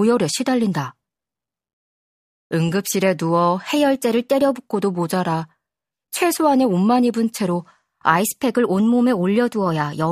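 At 3.76 s the speech abruptly runs about 6.1% fast, with pitch raised 102 cents, roughly a semitone, then snaps back to normal at 4.65 s. The same jump returns at 8.20 s and holds to the end at 10.11 s. Speed and pitch move together, which points to a drift correction step, likely from clock-matching software resampling in one coarse jump to rebalance its buffer.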